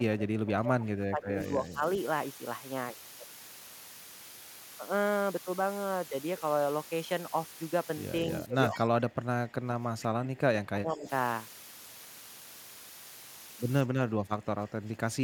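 The whole recording was quantised to only 6 bits, with dither added before rounding, a case of low bit depth with dither. The rounding error becomes steady white noise rather than distortion, so a constant, even hiss sits only about 15 dB below the speech from start to finish.

From 0.00 to 1.82 s, from 8.46 to 11.08 s and from 13.85 to 15.23 s, the echo canceller likely mistook simultaneous talk for its own loudspeaker echo and pulled the level down. This is speech suppressed in double talk. The voice dips by about 20 dB, about 25 dB and about 10 dB respectively.

Between 8.73 and 8.80 s, inside the second suppressed stretch, an echo leak briefly gets through. The far-end echo canceller likely failed to remove loudspeaker pickup, and a faint copy of the voice returns 154 ms late, roughly 20 dB below the speech, as a short scrap.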